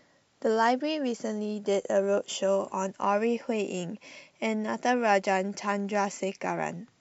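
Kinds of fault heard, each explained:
No kinds of fault are heard in this speech clip.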